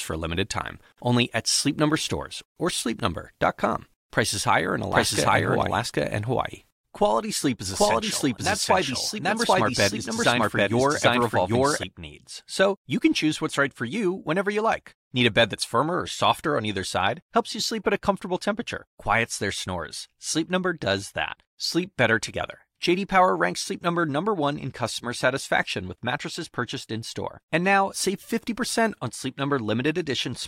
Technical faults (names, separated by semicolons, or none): doubled audio track